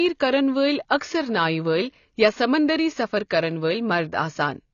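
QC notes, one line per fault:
Throughout: AAC compression, likely. The speech is dull and band-limited, with nothing above 6.9 kHz. Codec damage is plainly audible. The top of the spectrum is missing, and the remaining bands sound thin and smeared. The encoder appears to have cut the upper range to save bits and quantised the rest coarsely against a hearing model. This fits AAC-LC running at a low bitrate, around 24 kbps.
0.98 to 1.01 s: pre-echo, just after "کرَن وٲلۍ". A brief hiss of about 30 ms runs ahead of a sharp onset, and the attack sounds softened rather than crisp. The codec spreads its quantisation noise evenly over each transform block. The noise is sized for the loud attack near the end of the block, so it also fills the quiet gap before the onset and is heard early.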